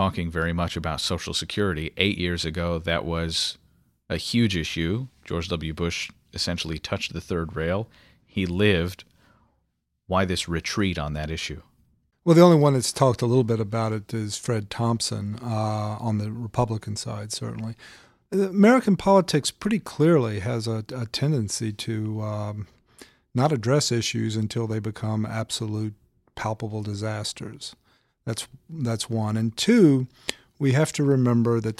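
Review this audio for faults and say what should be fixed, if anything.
Nothing needs fixing: the speech signal stays technically sound throughout, with no audible fault anywhere in the recording.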